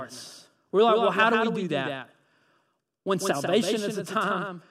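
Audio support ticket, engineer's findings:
Doubled audio track, throughout: likely second capture path or misaligned edit mixing speech in twice. Full-band copy trails about 150 ms behind, around 5 dB quieter, no decay or room colour.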